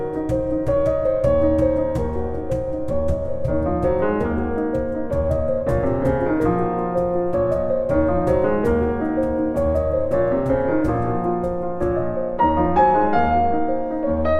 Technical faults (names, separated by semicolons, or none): none